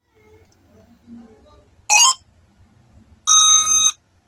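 At 0.48 s a repeated buffer produces a tiny burst. The player ran short of fresh audio and replayed its last chunk several times in a row. Each chunk lasts about 5.33 ms, which fits a 256-sample buffer. The joins are hard, so the repeats fuse into a brief buzzy click. It differs from a dropout because there is no silence: essentially nothing goes missing, and the repeated material stands in for the late audio.

From 1.03 s to the end, an adaptive stream at a lower bitrate takes over. The connection slowed and the player switched to a leaner encoding, which fits a move from Opus at 64 kbit/s down to around 16 kbit/s. The top end is cut, with nothing above 12.6 kHz, and codec artefacts rise. A plain low-pass filter would not add that coding texture, and packet loss would leave gaps. Here the quality drops suddenly and seamlessly and never recovers.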